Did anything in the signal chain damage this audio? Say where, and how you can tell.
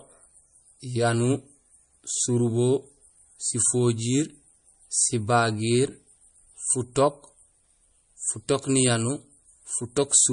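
Yes. The damage sits at the codec stage and runs through the whole speech clip: the treble stops dead at about 10.1 kHz, and the sound has a plainly audible watery, swirling texture with metallic chirps on s sounds. That is likely MP3 compression at a low bitrate, which fits roughly 40 kbps. Starved of bits, the encoder discarded the top band and zeroed weak frequency lines frame by frame. A spectrogram shows a flat ceiling and flickering holes below it.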